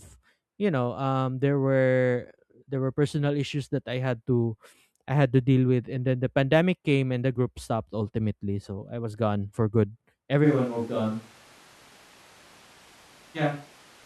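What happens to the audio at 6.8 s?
Nothing goes wrong at 6.8 s; the speech carries on intact through that moment with no dropout, click, distortion or other fault to be heard.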